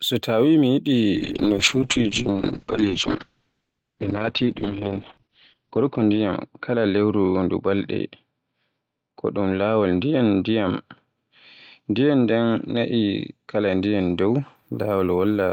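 From 1.16 s to 14.61 s, a call bitrate drop coarsens the speech and cuts the top above 6 kHz. The sound points to roughly 7 kbps at its lowest, for about 4.4 s.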